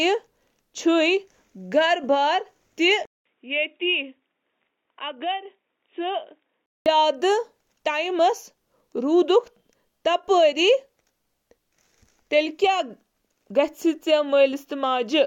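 A speech clip where, from 3.05 s to 6.86 s, the sound suddenly goes dull and boxy, with nothing above 3.8 kHz, then opens back up. There's a short silence of 200 ms at the changeover, the level drops by roughly 10 dB, and a faint new noise floor, around 50 dB down, comes in. That's likely an input switched to a poorer device mid-recording, like another mic or a headset's call profile, with its narrower band, lower gain and own hiss.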